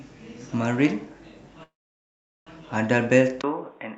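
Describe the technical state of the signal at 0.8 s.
At 0.8 s the speech signal is intact, with no dropout, glitch or distortion, only the ordinary coding character of the call path it passed through.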